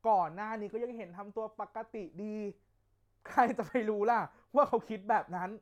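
No technical faults are audible.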